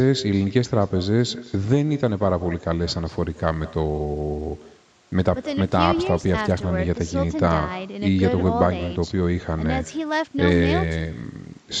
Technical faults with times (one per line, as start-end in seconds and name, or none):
0.00-11.80 echo with no canceller
3.10-6.63 Bluetooth SBC bit pool drop
9.78-11.58 Bluetooth SBC bit pool drop